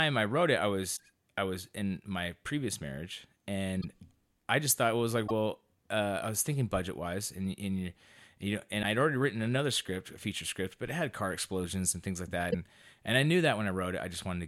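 A speech clip, most likely with a broken MP3 bit reservoir after dropped frames: five brief chirps, noise bursts or gaps, at 0.96–1.00, 3.80–3.84, 5.27–5.31, 8.82–8.85 and 12.50–12.55 s.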